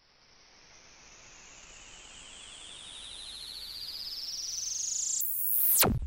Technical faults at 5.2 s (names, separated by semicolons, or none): section at the wrong speed